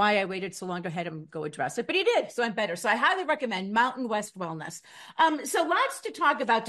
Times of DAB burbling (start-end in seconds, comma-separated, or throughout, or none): 4.25-4.30